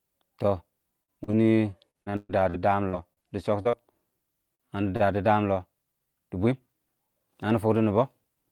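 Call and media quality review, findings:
Repeated packet loss (robotic sound), 1.03 to 3.76 s. Choppy speech with pieces missing. Thirteen gaps, longest 127 ms. About 530 ms patched by extending the last sound, 440 ms lost outright. Roughly a fifth of the span concealed. Component: network path and receiver loss concealment.

Jitter buffer slow-down, 2.39 to 4.71 s. Speech drawn out at unchanged pitch, running at 97% speed. About 81 ms added by repeating single pitch periods and pause fragments. Overlaps the loss burst. Component: receiver jitter buffer building reserve after running low or raising its target delay.

Short stall from a late packet, 4.55 to 4.62 s and 4.96 to 5.03 s. A sound held too long, slight buzz or dip. Nothing lost. First stall fills 44 ms, second 34 ms, ending just before "dəəmm lɔ". Delay rose by the same amounts. Component: jitter buffer underrun, last sound stretched until arrival.

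Jitter buffer speed-up, 5.92 to 7.76 s, after "dəəmm lɔ". Hurried speech at same pitch, 108% speed. Around 150 ms cut as short pitch-period slices. Component: receiver jitter buffer trimming excess delay.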